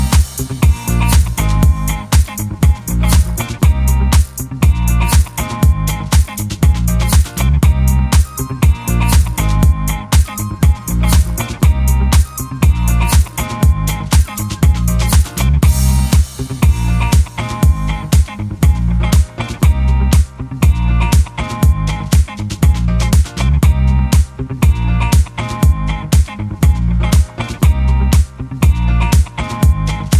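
There are no technical faults to describe in time order.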